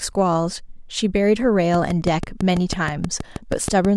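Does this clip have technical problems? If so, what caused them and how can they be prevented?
Yes, there is a train of clicks from 1.74 to 3.86 s: about fifteen similar pulses at a regular 6.2 per second, peaking well above the speech. The steady spacing likely points to interference from nearby equipment or a faulty connection or power supply injecting pulses. Keep cables and interfaces away from noisy devices and use a stable, properly powered interface.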